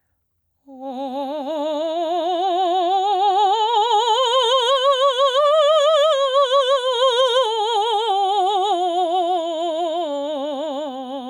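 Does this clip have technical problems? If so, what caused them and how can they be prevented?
Yes, there's gain pumping running through the whole piece of music. The level breathes audibly, swinging by something like 10 dB whenever a loud passage hits, so loud and soft parts sit squashed together. The likely cause is input gain set far too high, with a fast limiter or compressor clamping down on every peak. Keep the input gain sensible and use gentler, slower dynamics processing to prevent it.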